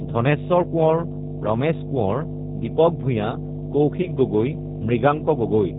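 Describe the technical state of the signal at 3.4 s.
At 3.4 s, two faults are present, and both run through the whole clip.

Mains hum sits under the speech as a steady low tone at 50 Hz. Power-line current is leaking into the signal path, probably through a ground loop or a nearby transformer. The hum is strong, only a few decibels below the speech itself. It drones continuously beneath and between syllables, with some low harmonics.

G.729 codec damage is also plainly audible here. The speech has been rebuilt from a vocal tract filter, a pitch predictor and a few pulses per frame, which fits an 8 kbit/s low-rate coding. Nothing above 4 kHz survives, so the sound is muffled and narrowband. The speech stays intelligible but sounds rough and slightly synthetic.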